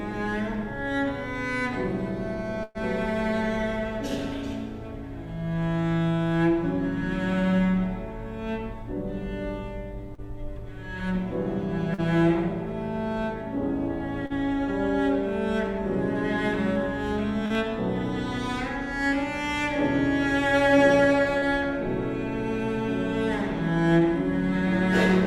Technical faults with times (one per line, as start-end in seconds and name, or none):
2.63-2.78 burst of packet loss
10.15-10.21 short concealed packet loss
11.94-12.01 short concealed packet loss
14.26-14.33 short concealed packet loss
17.46-17.53 short concealed packet loss
21.38-21.45 short concealed packet loss